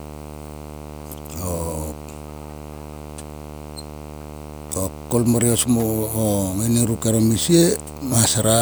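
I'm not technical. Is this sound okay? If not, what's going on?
No. A screen or its video cable is leaking electrical interference into the audio, a fault called video or display buzz. It adds a fairly loud, gritty buzz at 75 Hz, the screen's refresh rate, with a hash above it, running under the speech throughout.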